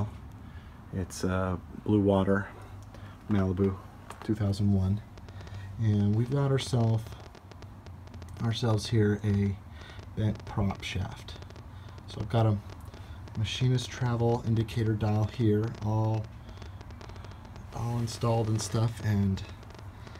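A train of clicks runs from 5.18 to 20.16 s: irregularly spaced pulses, about 10 per second, tick with peaks about 5 dB above the sound, likely from nearby electrical interference.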